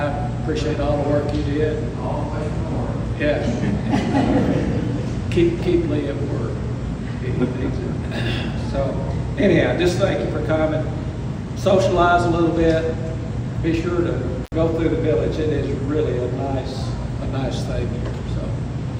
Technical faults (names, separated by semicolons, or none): intermittent contact